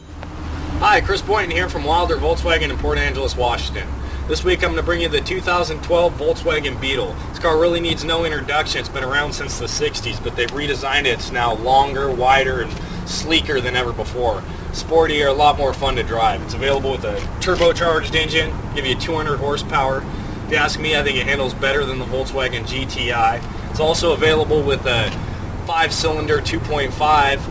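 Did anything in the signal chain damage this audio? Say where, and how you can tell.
Yes. The damage sits at a sample-rate conversion stage, where aliasing runs through the whole clip. Content that belonged above the new band edge folds back below 8 kHz as gritty, metallic tones at pitches unrelated to the source, roughly 25 dB under the signal, which points to a drop to a 16 kHz rate with no anti-alias filter in front. On a spectrogram, energy runs hard up to 8 kHz, with mirrored, inverted partials beneath it.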